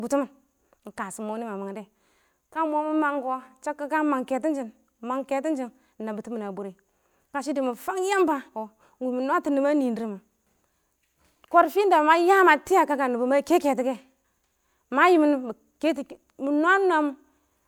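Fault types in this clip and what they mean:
No faults detected across the speech recording.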